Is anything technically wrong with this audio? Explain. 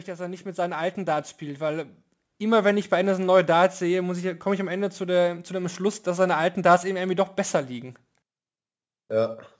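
Yes. From 0.05 to 2.87 s there is automatic gain rising: the automatic gain control judged the incoming speech too quiet and kept turning its gain up, by about 10 dB over nearly three seconds. The voice and the background noise swell together, so the opening sounds like it is slowly fading in. The call's microphone processing, which leaves nothing above 8 kHz, is normal for a call and not a fault.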